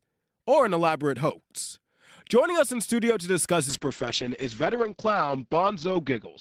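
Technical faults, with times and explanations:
3.7 s to the end, call bitrate drop: the encoder's budget falls from 32 kbps to 8 kbps, so the speech turns coarse and watery, and the top end goes dull as the audio bandwidth shrinks from 20 kHz to 8 kHz. That's the encoder throwing away detail and high frequencies to fit the lower rate after the bandwidth estimate fell. It sits at its lowest for about 2.3 s and never recovers before the clip ends.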